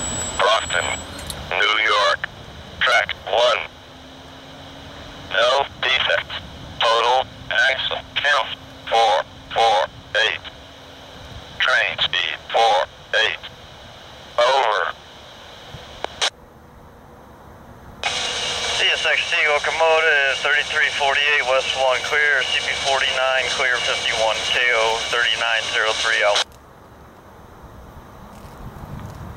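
No technical faults can be heard anywhere in the signal.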